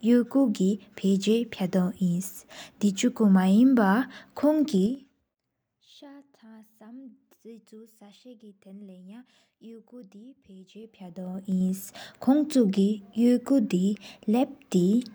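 At 4.78 to 5.38 s the speech is turned down by roughly 25 dB in unsmoothed 4 dB jumps, about ten a second, and the level comes back up the same way from 10.67 to 11.69 s in 2 dB jumps. Each jump leaves a small click, so both moves carry an audible ticking, the zipper noise of stepped gain.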